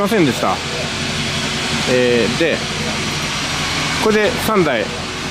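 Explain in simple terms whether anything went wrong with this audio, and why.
A feedback whistle is present, likely because sound from a loudspeaker was leaking back into the microphone, with the loop held right at its tipping point. From 1.06 to 4.42 s, a faint, thin whistle at about 5.8 kHz, slowly swelling and fading, sits behind the sound.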